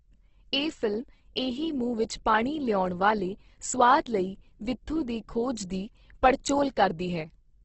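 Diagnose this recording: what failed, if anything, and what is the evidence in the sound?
Opus compression runs through the whole speech recording, a codec-stage fault. The sound is grainy and rough, with hiss-like texture filling in where detail should be, and nothing above 8.2 kHz. That pattern points to a likely low-rate Opus encode in its CELT music mode, consistent with roughly 12 kbps at wideband. Short of bits, the encoder preserves each band's energy but rebuilds the fine structure from folded lower bands or noise, which produces the grain.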